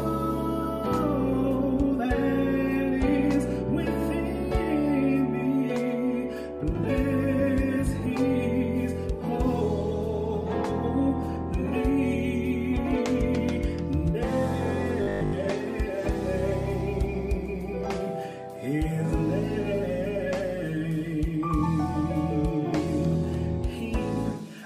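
From 15.03 to 15.33 s, fresh audio was likely arriving too slowly, so the playback side kept looping a fragment about 20 ms long while the true signal for most of that stretch went missing. This is robotic sound from repeated short buffers: the constant loop length stamps a fixed 50 Hz buzz onto the audio, turning it hard, metallic and mechanical for that 0.3 s while its broad outline still loosely tracks the original.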